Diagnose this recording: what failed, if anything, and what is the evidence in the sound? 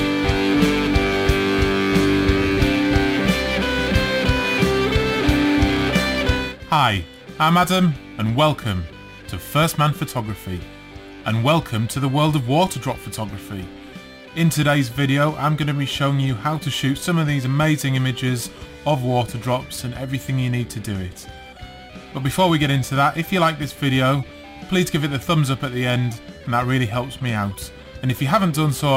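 Crude rate conversion at the sample-format conversion stage, present for the whole recording. A gritty, inharmonic fizz rides on loud and bright passages, roughly 25 dB below the sound. Samples were repeated without filtering, which fits a 44.1 kHz to 48 kHz conversion, leaving a periodic error pattern.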